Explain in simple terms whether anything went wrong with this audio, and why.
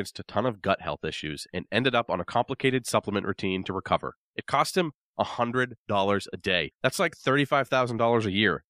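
Nothing went wrong with this speech recording. No technical problem can be heard at any point in it, so there is no fault to explain.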